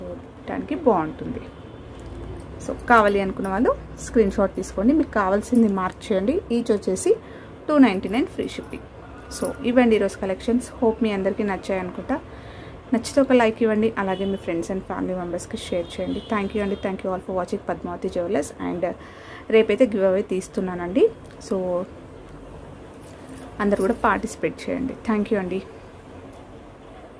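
No technical faults can be heard anywhere in this audio. Nothing in the sound needs a timestamp or a closer look.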